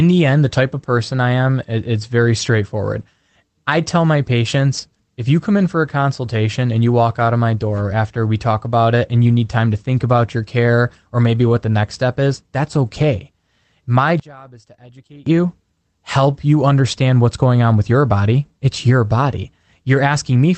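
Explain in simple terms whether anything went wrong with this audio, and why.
Two things went wrong in this speech recording. At 4.77 s, between "I tell my" and "if you come in", there is a lost packet rebuilt from error correction. One 20 ms piece of audio went missing, and the decoder filled it from a rougher backup copy, so that instant sounds briefly coarse and noisy, with no gap.

From 14.20 s to 15.27 s, just before "you help you understand", the voice suddenly drops to a faint trace. The likely cause is one channel inverted: one stereo side was flipped upside down, so when both sides were combined they mostly cancelled each other out.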